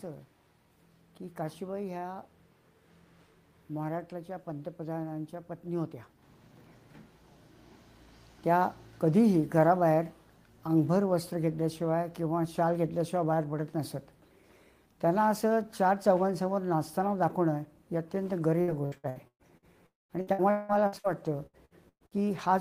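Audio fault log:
18.61–19.65 s, 20.21–21.07 s and 21.46–22.27 s: repeated packet loss (robotic sound). The three stretches hold six, five and five gaps. Each hole is bridged by stretching the last received sound, so roughly 40 to 47 percent of each span is synthetic. The longest holes run 119 ms, 184 ms and 116 ms. Because holes follow one another closely, the audio turns choppy, with fragments missing.
19.86–20.12 s: long network dropout, likely. Audio stops arriving for about a quarter of a second. The receiver first prolongs the last sound as a fading buzz, then leaves about 200 ms of near-silence. The sound resumes further on with that section lost, immediately ahead of the next robotic stretch.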